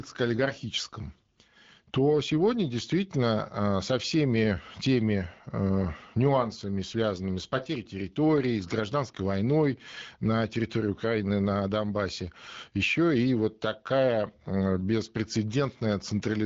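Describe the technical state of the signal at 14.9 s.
At 14.9 s the speech is intact, passing through the AMR wideband (HD Voice) codec at 12.65 kbit/s with no fault at that moment.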